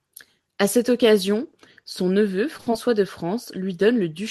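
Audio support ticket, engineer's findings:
Short concealed packet loss at 2.57–2.61 s and 2.71–2.74 s, just after "cette occasion son neveu". About 20 ms of audio lost each time. Decoder extrapolated the last sound, leaving a brief smear.

Short stall from a late packet at 2.61–2.69 s, between the two losses. Jitter buffer ran dry, and the sound was held about 60 ms until the packet arrived. Nothing is lost, but the sound drags. Call path audible as Opus coding with a top near 12 kHz.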